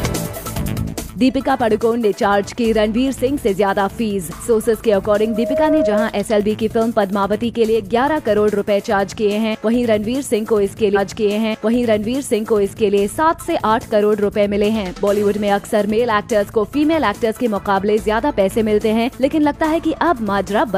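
At 5.14 s there's loudspeaker feedback squeal: the mic catches its own speaker, and a 627 Hz tone swells in under half a second, sitting a few dB over the programme until 6.18 s. Then at 10.92 s the stream segment is repeated, with a small blip at the jump back, replaying about 2.0 s of audio through 12.91 s.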